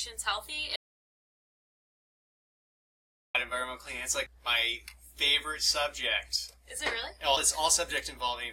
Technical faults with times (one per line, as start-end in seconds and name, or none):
0.76-3.35 audio dropout to silence
4.26 CD skip